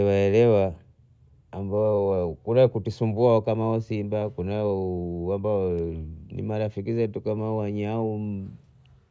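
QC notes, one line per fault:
No technical faults can be heard anywhere in the signal, which stays continuous and steady across the whole recording.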